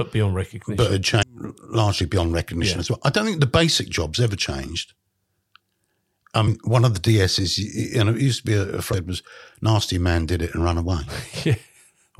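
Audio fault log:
1.19–1.23, 6.44–6.48 and 8.90–8.94 s: damaged data in a compressed stream. Each is a brief blip about 40 ms long where corrupted bytes make the decoder misread frames, lose sync and hunt for the next valid header, so you get a quick chirp, squawk, click or short hole.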